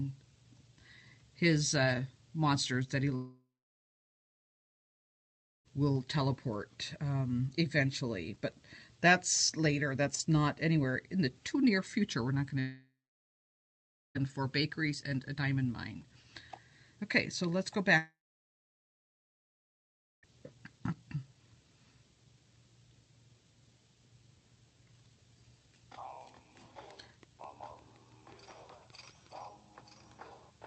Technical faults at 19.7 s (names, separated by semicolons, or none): long network dropout